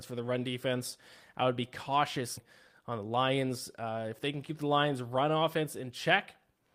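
Skip ahead at 2.37 s: playback jumps straight forward with no gap, because roughly 0.7 s of speech was dropped while later audio was already queued. The two sides of the jump are joined almost directly, so that stretch of speech is simply missing.

Jitter buffer speed-up from 2.69 s to 4.04 s: the receiver was holding more audio than its target and trimmed many short pitch-period pieces in a row, about 150 ms in total. The speech runs at about 109% speed at unchanged pitch and sounds noticeably hurried.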